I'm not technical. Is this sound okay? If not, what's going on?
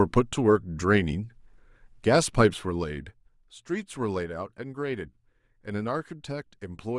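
No. Zipper noise runs from 2.39 to 3.41 s while the speech gets quieter. The volume is lowered in a few coarse jumps, about three per second, instead of one smooth glide, and each jump leaves a small tick that sounds like a zip being pulled.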